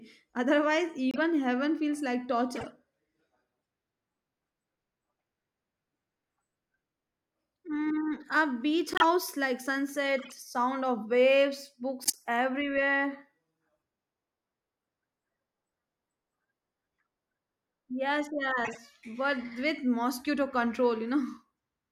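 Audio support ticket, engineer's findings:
Decoder accepted bit-damaged compressed frames and played them as valid (corrupt frame decoded). Misread gains and codes put energy in the wrong bands for roughly a few frames each. Heard as short chirps and noise bursts in speech at 1.11 s (just before "heaven feels like"), 2.55 s (after "heaven feels like"), 8.93 s, 10.18 s, 12.02 s (after "sound of waves", longest, near quarter second) and 18.65 s. Loudest at 8.93 and 12.02 s, faint at 10.18 s.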